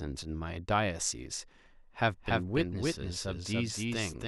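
A second copy of the signal is likely getting into the mix, either through a slower capture path or from an edit that leaves two copies out of step. From 2.09 s to the end, this doubled audio track adds a full-band duplicate of the speech roughly 300 ms behind the original and at about the same level. The repeat has no decay or room colour, so every syllable lands twice. It starts abruptly at 2.09 s.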